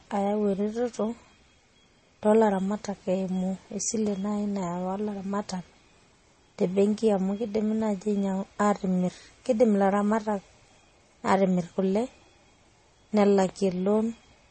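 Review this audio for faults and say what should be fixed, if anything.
From start to end the speech sounds dull, with nothing above about 8.4 kHz. The artefacts of different codecs are heard at once. This is likely transcoding between lossy codecs, fitting an MP3 at around 32 kbit/s re-encoded to Vorbis near 30 kbit/s. The second encoder wasted its bits reproducing the first one's damage, added its own, and kept the lower bandwidth limit. To prevent this, encode once from the original uncompressed source at an adequate bitrate rather than converting between lossy formats.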